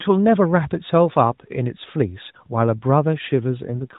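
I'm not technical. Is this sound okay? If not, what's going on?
No. From 3.68 s to the end at 3.98 s there is an AMR rate drop: the phone codec, which carries the speech through its usual phone-call band, switches to a lower rate, so the speech turns rougher and more synthetic, with no gap.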